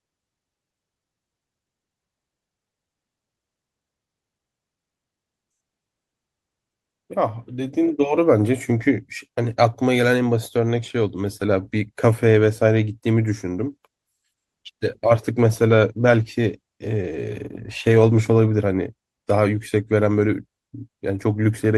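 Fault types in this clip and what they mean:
Call bitrate drop, 13.59 to 18.53 s: the call's bandwidth estimate fell, so the Opus encoder had to describe the same speech with far fewer bits, and the sound turns coarser and rougher for nearly five seconds before clearing. The degradation fits a cut from 40 kbps to 16 kbps. At such a low rate Opus also trims the upper frequencies, so the speech loses some of the brightness heard before 13.59 s.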